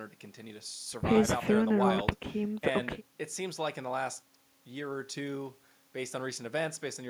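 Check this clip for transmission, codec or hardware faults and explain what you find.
Nothing stood out on listening; the speech comes across steady and intact, with no fault audible anywhere in it.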